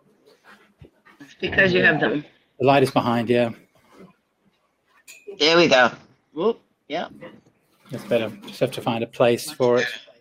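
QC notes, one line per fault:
2.05–2.07 s, skip ahead: about a second of audio is dropped and the sides are joined directly with no fill. On a waveform this shows as an abrupt seam, and on a spectrogram as a sudden change in content.
2.15–4.13 s, jitter buffer speed-up: the receiver removes short pitch-period pieces to shed about 0.2 s of excess delay. Playback runs at 109% speed at the same pitch, so the spectrogram shows compressed timing and unchanged harmonics.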